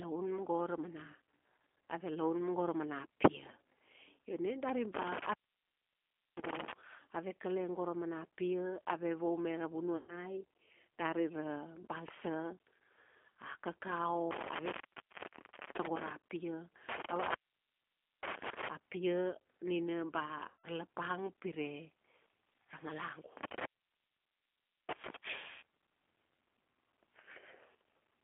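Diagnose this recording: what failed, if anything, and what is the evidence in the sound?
The codec stage is at fault throughout. The speech has the slightly rough, synthetic texture of a low-rate model-based coder, which points to an 8 kbit/s G.729 codec rebuilding each frame from a vocal tract filter, a pitch predictor and a handful of pulses rather than the waveform itself. On a spectrogram the energy sits in a telephone band of about 250 Hz to 3.4 kHz, with a hard ceiling above 3.4 kHz and little below 250 Hz.

The network stage also failed, causing VoIP packet loss concealed by the speech codec, at 9.97–10.20 s (just after "ave vaume ra"), 20.48–20.67 s and 25.52–25.62 s. These gaps of 120, 160 and 100 ms fit runs of lost 10 ms frames. The decoder stretches the last pitch and filter into a buzzy tone or a coloured noise that fades, instead of real speech. On a spectrogram, the frozen sound smears horizontally and dims. 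The waveform shows a decaying envelope, with weak, distorted speech just after each gap.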